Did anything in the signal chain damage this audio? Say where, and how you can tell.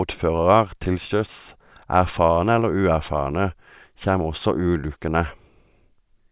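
No, nothing stood out on listening to this speech clip; no stage of the signal chain left an audible mark on it.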